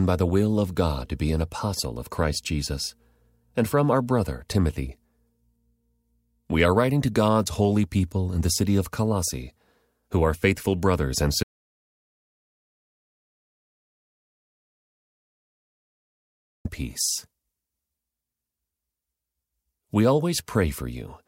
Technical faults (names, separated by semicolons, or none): audio dropout to silence